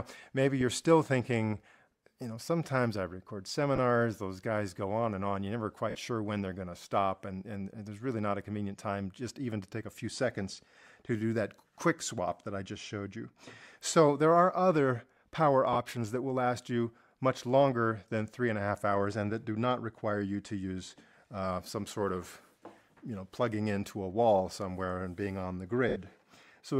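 Bluetooth LE Audio frames were lost four times, at 3.76–3.78 s, 5.90–5.95 s, 15.73–15.77 s and 25.89–25.96 s, covering about 20, 50, 30 and 70 ms. Each time the LC3 decoder concealed the gap by reusing the last spectrum with randomised signs, so tonal parts of the audio blur into a short noisy smear, and the light lossy compression on the clip leaves no clear trace of its own.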